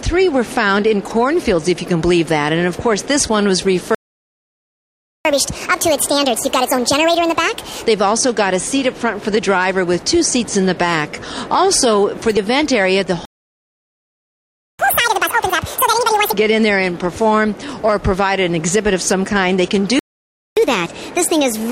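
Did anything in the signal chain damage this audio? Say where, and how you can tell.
Yes. Playback stalls at 3.95 to 5.25 s (1.3 s), 13.25 to 14.79 s (1.54 s) and 19.99 to 20.57 s (0.58 s): the output goes fully silent, likely because the player was starved of data or blocked. Network packet loss leaves short, scattered gaps; these are long clean silences.

Catch-up at higher speed follows each stall in the playback stage: 1.5× from 5.25 to 7.86 s (about seven semitones up), 2× from 14.79 to 16.33 s (about ten semitones), and 1.25× from 20.57 s to the end (about four). Clock drift is slow and continuous; this appears only after stalls.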